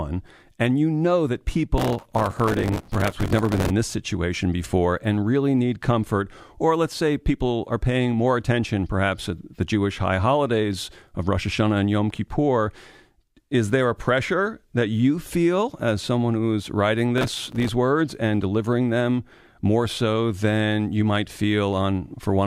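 A speech clip with processor overload crackle in two bursts, from 1.78 to 3.70 s and from 17.18 to 17.69 s. Buffers of only a few milliseconds are repeatedly missed, and each gap is filled with a repeat of old audio with hard edges. That gives a gritty tearing over the voice that stops once the load eases. Clipping distortion would instead follow the loudness of the signal.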